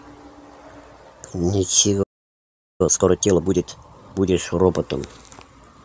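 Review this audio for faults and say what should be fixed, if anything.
Playback stall, 2.03 to 2.81 s: the speech cuts off mid-flow and the output sits silent for about 0.77 s before picking up again. The player most likely ran dry of buffered data, or its audio thread was held up, so there was nothing to send to the output until it recovered. Prevent it with a deeper playback buffer and by keeping the audio thread free of blocking work.

Time-compressed catch-up, 2.81 to 4.33 s: straight after the gap the speech comes out hurried, at 1.5 times normal speed but at its normal pitch. The player is working off the backlog from the stall by dropping small slices of audio and cross-fading across the joins. Prevent it by fixing the stall, or by capping catch-up to a gentler rate spread over a longer stretch.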